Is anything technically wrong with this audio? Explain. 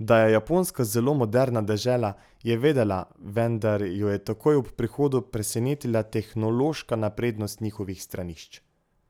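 No, nothing technically wrong stood out on listening to this speech recording.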